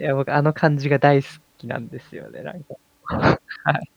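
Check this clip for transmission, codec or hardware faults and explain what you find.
Nothing faulty can be heard anywhere in this speech recording. There is nothing further to report.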